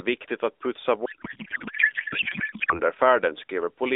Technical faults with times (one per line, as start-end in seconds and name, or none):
1.06-2.80 codec payload misread